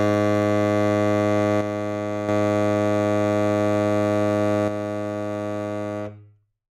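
A stereo channel likely drops out twice in this music, and once the two sides are summed to mono, everything shared between them sinks abruptly by about 6 dB. The first dip runs from 1.61 to 2.29 s, a brief hollow lasting about 0.7 s before the level snaps back. The second starts at 4.68 s and continues to the end of the clip.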